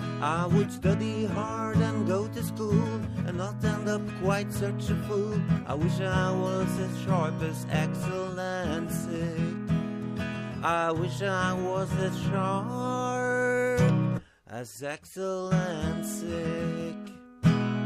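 No technical faults can be heard anywhere in this audio.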